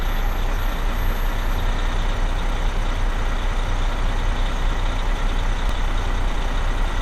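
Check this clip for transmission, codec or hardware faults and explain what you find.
One fault turns up. At 5.69 s there is a brief skip where the audio jumps forward, from an overlap between stream segments that trimmed a few milliseconds at a boundary consistent with 4-second segments.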